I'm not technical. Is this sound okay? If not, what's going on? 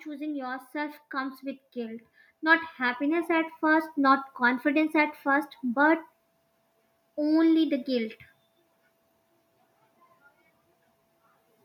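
No. Automatic gain rising runs from 0.05 to 3.94 seconds, ending just before "not confidence at first". The recording level control judged the input too quiet and slowly turned it up, so the speech and the background noise behind it grow louder together.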